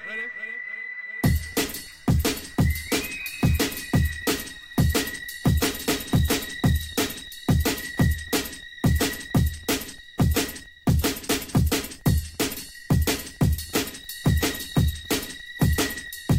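No technical faults can be heard anywhere in the recording. Nothing in it calls for a timestamp or a correction.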